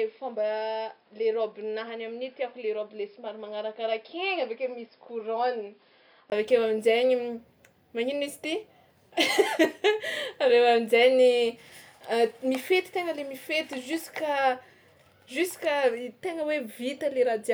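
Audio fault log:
0.00–6.32 s, input switched to a poorer device: the speech sounds dull and boxy, with nothing above 5.3 kHz, about 5 dB quieter, and carries faint added noise roughly 40 dB down. A 20 ms gap at 6.32 s precedes fuller sound, likely a microphone or headset-profile change.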